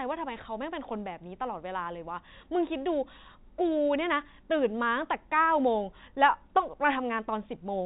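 Speech, with no technical faults to point out.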